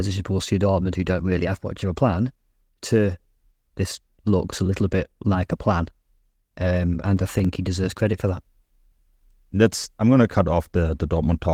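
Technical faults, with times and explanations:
7.06–7.45 s, processor overload crackle: for almost 0.4 s the speech breaks into a gritty, tearing crackle as the processor falls behind and misses a run of buffer deadlines, around fifteen of them. Each late buffer is skipped outright rather than filled, so the waveform jumps abruptly at every gap, and those tiny hard-edged discontinuities, each about 0.7 ms long, fuse into crackle that stops once the load eases. The light Opus voice-compression colouring stays constant across this stretch.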